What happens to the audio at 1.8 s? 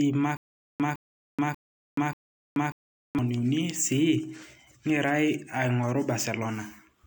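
At 1.8 s the speech is caught in a stutter with silent gaps, running from 0.37 s to 3.19 s. A 159 ms fragment plays, then about 429 ms of dead silence follows, and the pattern repeats four times on a 588 ms cycle. The likely cause is a stalled stream that replays its last buffered piece on each retry. On a waveform, identical blocks sit between flat silent lines. A spectrogram shows matching slices separated by blank columns.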